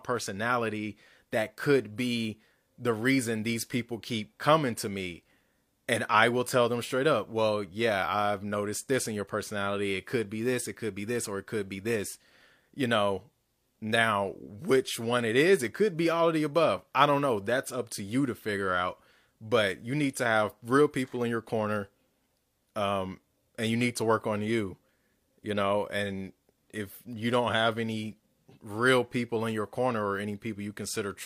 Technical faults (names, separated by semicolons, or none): none